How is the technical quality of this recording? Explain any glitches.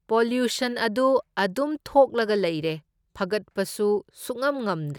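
No glitches are audible anywhere in the recording, and the speech signal shows no technical faults.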